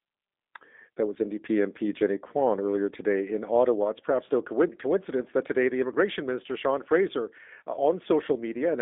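From start to finish the speech runs through a G.729 codec, the G.729A variant, and it shows plainly. Everything sits inside roughly 250 Hz to 3.6 kHz with nothing above 3.7 kHz, and the pulse-based rebuild at what sounds like 8 kbit/s leaves the voice rough, thin and a bit synthetic.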